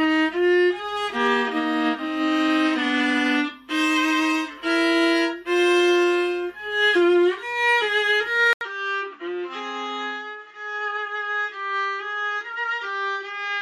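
Input switched to a poorer device at 8.53 s, likely a change to another microphone, after an 80 ms silence. From there to the end, nothing reaches above 7.4 kHz, the level drops about 10 dB, and a faint new noise floor appears, leaving the sound duller.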